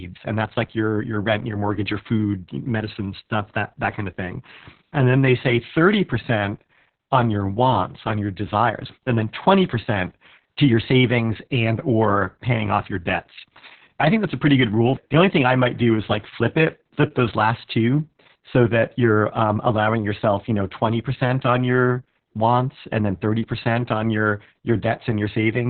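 From start to finish the speech carries heavy Opus voice compression damage. Nothing is audible above about 4.3 kHz, so the sound is confined to a narrow telephone-like band and sounds muffled. The coarse excitation gives voicing a hoarse, slightly robotic edge. That combination points to the SILK linear-prediction coder running in narrowband mode at a very low rate, which fits something near 6 kbps with long 60 ms frames.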